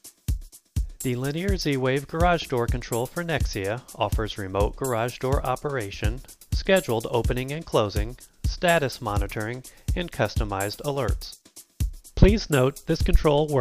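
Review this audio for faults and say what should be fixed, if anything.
No faults turn up in this audio, so nothing needs to be fixed.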